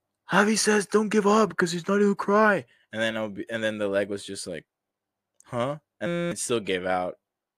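Speech runs normally until a harsh, steady buzz takes over from 6.07 to 6.32 s, pitched around 172 Hz, with about a third of a second of the talk missing. This is a system hang loop. The computer or its audio driver stalled, and the sound hardware kept replaying the same tiny 5.8 ms slice of its ring buffer dozens of times. That short cycle, which fits a 256-sample buffer, fuses into a tone rather than a stutter.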